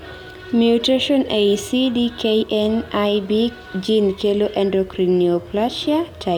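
No technical faults can be heard anywhere in this speech recording.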